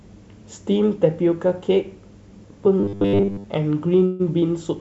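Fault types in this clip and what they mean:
Robotic sound from repeated short buffers: From 2.80 to 3.46 s the speech turns into a stiff, metallic buzz pitched at 100 Hz while it still loosely tracks the talking. That pitch matches a 10 ms stretch being played over and over, most likely because fresh audio was arriving too slowly and the receiver kept looping its last short buffer to fill in, so roughly two thirds or more of that span is repeated material rather than new sound.
Call audio freeze: At 4.06 to 4.22 s the sound hangs for 136 ms, stretched out to cover the wait instead of dropping to silence. The likely cause is packets held up in transit that left the jitter buffer empty. When they arrived, playback picked up exactly where it paused, so nothing is lost and the rest of the clip now runs 136 ms later. This is a pause inserted into the audio, not a cut.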